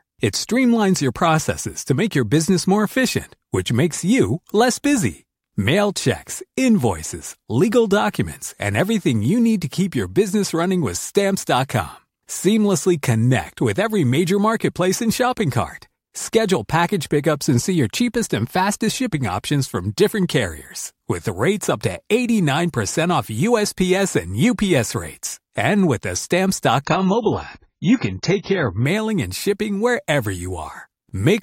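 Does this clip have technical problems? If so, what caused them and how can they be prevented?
Yes. From 26.85 s to 28.85 s the speech switches abruptly to an adaptive stream at a lower bitrate: nothing remains above 7 kHz, and the sound turns dull and coarse, which fits a drop from roughly 96 to 16 kbit/s AAC. The player picked a cheaper version when throughput fell. Unlike packet loss, there is no gap or stutter, just a clean step down and back up in quality. Larger playback buffers and steadier bandwidth prevent it.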